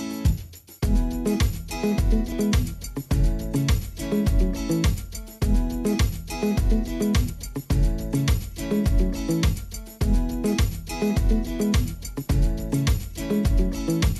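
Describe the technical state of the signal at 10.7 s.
At 10.7 s the signal is intact, with no dropout, distortion, glitch or other fault audible at that point.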